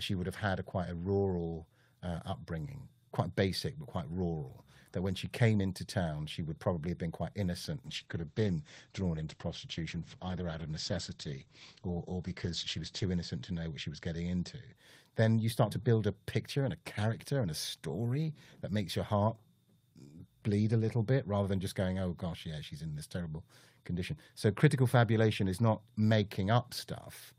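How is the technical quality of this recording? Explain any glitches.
The recording has one fault, a call bitrate drop from 7.87 s to 14.81 s. The encoder's rate falls from 32 kbps to 10 kbps and stays at the bottom for about 5.2 s. A lower bandwidth estimate forces coarser coding, and the audio bandwidth shrinks from 20 kHz to 8 kHz. The speech sounds muffled and rough and watery, losing its sibilance and air, until the bitrate recovers near 14.8 s.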